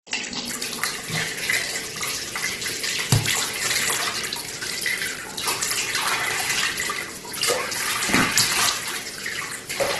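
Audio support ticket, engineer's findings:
Grainy, rough tonal sound throughout, nothing above about 12.1 kHz. Likely Opus compression, music mode, bands noise-filled at a starved bitrate, fitting roughly 12 kbps.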